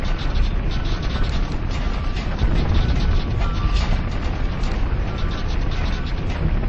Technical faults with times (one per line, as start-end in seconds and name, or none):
0.00-6.68 wrong sample rate